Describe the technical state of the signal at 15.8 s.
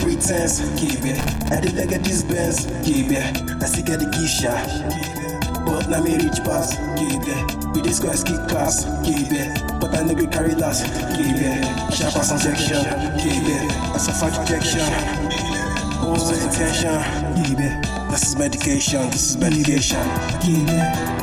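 A doubled audio track runs through 15.8 s, from 10.95 s to 16.83 s. The same audio is mixed in twice, most likely because it is picked up a second time through a slower path, with the second copy trailing by roughly 150 ms at about 5 dB quieter. It is a clean, full-band repeat with no decay or room colour, giving a hard slapback that starts and stops abruptly at those edges.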